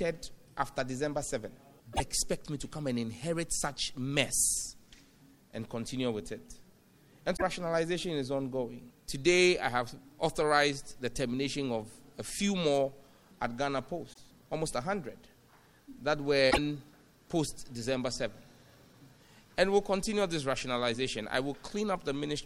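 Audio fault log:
1.90–2.01 s, 7.33–7.42 s, 14.12–14.19 s, 16.47–16.58 s: damaged data in a compressed stream. Each is a brief chirp or blip, about 70 to 110 ms long, where corrupted bytes left the decoder misreading frames and losing sync until it found the next frame header.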